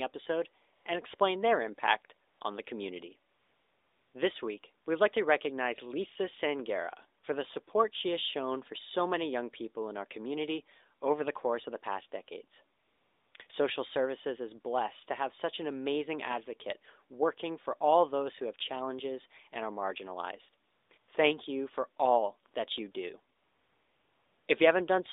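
A speech recording carried over a narrowband mobile AMR path, heard as a band of roughly 300 Hz to 3.7 kHz. It has thirteen AMR comfort noise gaps between 0.76 s and 24.48 s. Most last 20 to 120 ms. The longest follow "impact on the community" (3.32 to 4.14 s) and "of the past decades" (12.78 to 13.34 s), and run from 23.36 to 24.48 s. In each, the phone stopped sending speech frames. The receiver substituted smooth synthetic noise that switches in and out.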